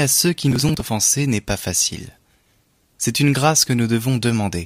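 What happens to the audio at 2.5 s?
Nothing goes wrong at 2.5 s: the speech carries straight through that moment with no dropout, click, distortion or other fault.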